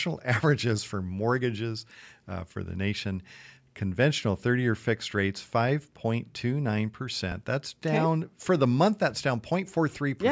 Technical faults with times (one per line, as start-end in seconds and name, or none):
7.32 repeated buffer